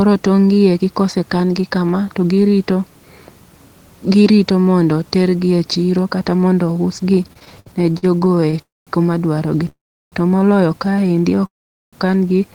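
From 7.23 to 8.61 s, repeated stalls (stutter) make the speech drag: twenty brief gaps up to 60 ms, each bridged by repeated sound, leaving stretched, smeared bands on a spectrogram. Call audio freezes follow at 8.62 to 8.90 s, 9.69 to 10.15 s and 11.46 to 11.96 s, likely from packets held up until the jitter buffer emptied. Each holds the last sound as a fading buzz, then falls into flat silence of 190, 350 and 430 ms. These show as blank waveform stretches before the speech resumes where it stopped.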